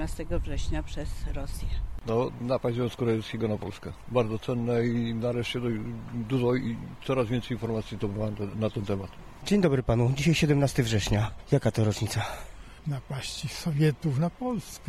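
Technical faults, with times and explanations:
No technical faults, with times and explanations, to report.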